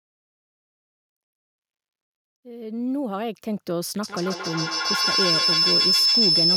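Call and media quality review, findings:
Feedback howl, 4.03 s to end: acoustic loop between two devices in one room, gain above unity per pass. Tone near 5 kHz builds, pulsing about every 150 ms, peaking about 7 dB over speech, never decaying.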